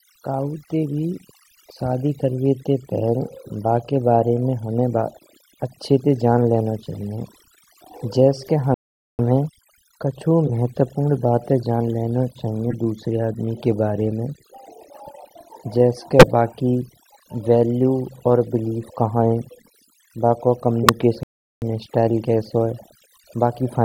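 Overdone noise removal runs through the whole thing. The background drops and breaks up into little twinkly specks, and the speech loses its quieter parts where they got stripped with the noise.

At 8.74–9.19 s the sound just drops out for about 447 ms and then picks up again. That's a playback stall, likely the player starving for data.

Corrupt frames decoded show up as short chirpy blips at 10.47–10.50 s and 12.70–12.74 s, each spanning a couple of frames, then at 16.19–16.27 s right after "जैस के", a few frames this time. Garbled frame data is putting energy at the wrong frequencies.

Another corrupt-frame burst hits at 20.83–20.90 s, with roughly 20 ms of audio skipped.

Then a second stall, about 387 ms of silence from 21.23 to 21.62 s, comes right before "स्टाइल कैसो है".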